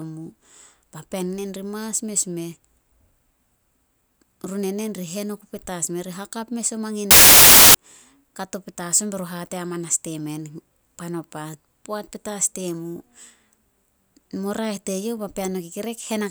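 From 7.11 to 7.75 s the speech gives way to loud, harsh broadband noise: samples built from the wrong bytes. Each sample's bytes are assembled in the wrong order or alignment, so the rapidly varying low bits land in the high positions and swamp the original signal.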